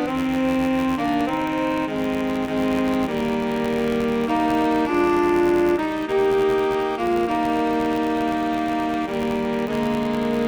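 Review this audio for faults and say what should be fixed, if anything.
A filter restarted on every block runs through the whole clip: it discards its internal state at each block boundary and begins again from silence, so each block opens with a small transient. The result is a steady buzz at 86.1 Hz, which fits a 512-sample buffer, rising and falling with the level of the audio. The fix is to keep the filter's state between blocks so each block continues from where the previous one ended.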